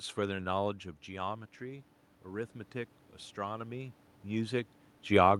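From 1.06 to 2.6 s, automatic gain rising: the input fell by about 11 dB and the gain control climbed about 4 dB, so voice and room noise swell together. A talker moving, as near 0.5 s and 4 s, shifts only the voice.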